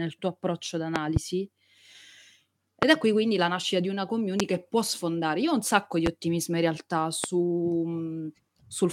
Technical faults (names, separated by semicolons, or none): loud pop